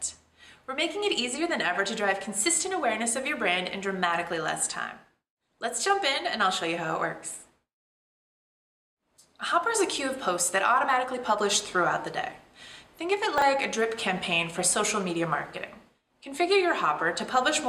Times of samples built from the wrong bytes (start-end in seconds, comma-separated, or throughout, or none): none